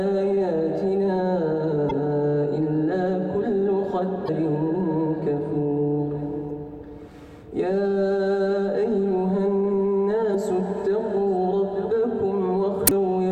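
Brief glitches at 1.89–1.91, 4.25–4.29, 6.47–6.50, 10.31–10.35 and 12.84–12.91 s mark damaged data in a compressed stream. Corrupted bytes make the decoder misread frames and lose sync. Each shows as a short broadband vertical smear on a spectrogram and an abrupt waveform discontinuity.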